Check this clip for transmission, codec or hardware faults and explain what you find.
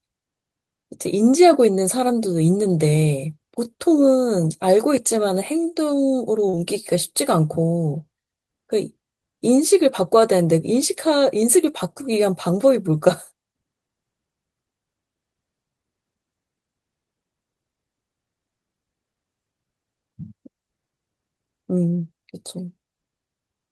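There is one transmission fault. At 6.49 to 6.55 s there is a short concealed packet loss. About 40 ms of speech arrived too late to decode. The receiver bridged 37 ms by extending the preceding sound, then faded back. It is heard as a brief smear.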